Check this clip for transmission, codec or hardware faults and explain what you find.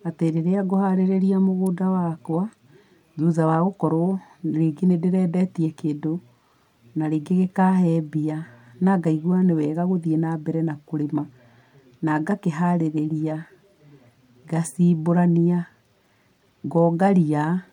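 One fault turns up: an electrical switching spike at 1.66 s, a sharp snap over the speech, likely from a nearby switch or discharge arcing into the audio line, peaking around -20 dBFS.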